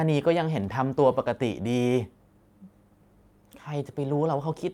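A speech recording with no technical fault to point to. Nothing in it calls for a time, a value or a cause.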